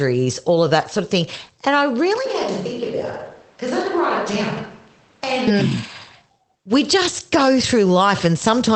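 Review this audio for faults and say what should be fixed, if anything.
Switch to a distant microphone, 2.26 to 5.47 s: speech abruptly turns hollow and roomy, about 5 dB quieter with more room noise, likely from a lost close-mic feed. Secure and monitor the close microphone's connection so the recording never falls back to a distant source mid-take.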